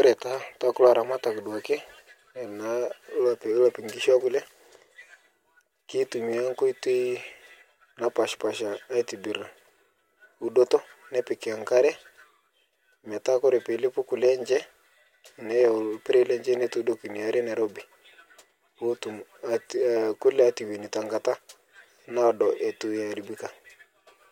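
Nothing stood out as a technical fault on listening to the speech in this recording.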